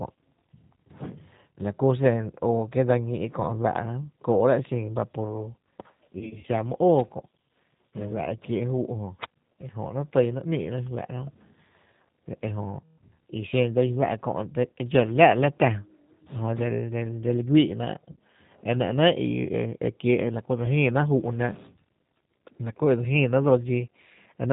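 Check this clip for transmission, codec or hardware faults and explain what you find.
Yes, there are two problems: the whole clip went through a low-rate speech codec, and there are three dropouts where the decoder had to fill in missing audio.

The G.729 codec sound runs start to finish, and the damage is plainly audible. Everything above 4 kHz is gone, and the speech has that rough, slightly synthetic edge you get when the decoder rebuilds the voice from a filter, a pitch predictor and a few pulses per frame at 8 kbit/s.

VoIP packet loss concealed by the speech codec shows up at 6.19 to 6.44 s, 12.80 to 12.96 s and 18.12 to 18.16 s. The first dropout is about 100 ms lost, scattered over 240 ms with runs up to 40 ms. The second is about 180 ms and the third about 60 ms, which fits roughly nine and three lost packets. In each gap the decoder keeps extending the last pitch and filter while fading the level, so you hear a stretched, buzzy tone or coloured noise that dies away. 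The speech stays weak and a bit distorted for a short while after real audio resumes.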